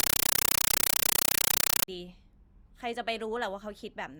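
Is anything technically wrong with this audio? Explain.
Yes. From the start to 1.88 s, loud, harsh, chattering static replaces the speech, pulsing about 31.25 times a second, with each burst lasting about 8 ms and followed by silence. This is a compressed stream played as audio: encoded Dolby Digital (AC-3) data sent over a digital link was treated as ordinary samples instead of being decoded. Each compressed frame comes out as a noise burst followed by zero padding, and the burst pattern fits a stream of roughly 384 kbps.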